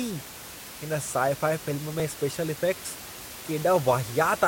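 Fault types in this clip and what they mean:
Overlap between stream segments: Two neighbouring stream segments claim the same span of time. The player discards the shared part, though that sound was never actually duplicated. About 18 ms of speech is lost at 2.0 s. It is heard as a tiny skip. The position fits 1-second segments.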